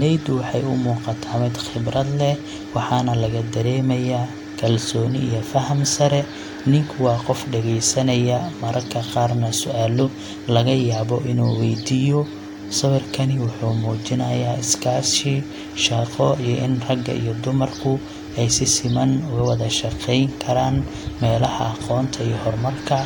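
No technical faults detected anywhere in the speech recording.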